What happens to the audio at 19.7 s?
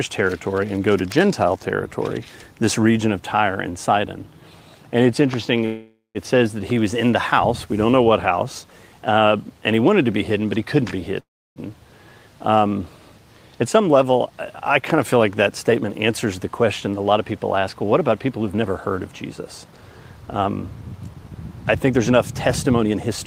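Right around there you get a jitter buffer speed-up, from 19.64 to 19.93 s. The receiver had built up extra delay and trimmed it by cutting short pitch-period chunks, about 50 ms in total, so the sound runs at 114% speed with the pitch unchanged and feels briefly rushed.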